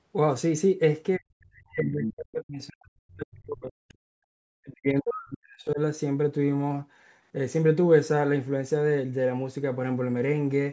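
From 1.18 to 3.90 s and again from 4.06 to 5.79 s, the speech is suppressed in double talk: the talker's level sinks by up to about 40 dB in patches. This is likely the echo canceller clamping down while both sides spoke. Unlike a network dropout, the level dips and recovers rather than cutting cleanly.

Between them, at 3.89 to 3.94 s, a brief scrap of the other side's voice leaks through, about 35 dB below the speech. It is a separate faint voice, not the talker's own sound repeated, most likely loudspeaker echo left in by the canceller. The call microphone processing, with nothing above 8 kHz, is working as expected.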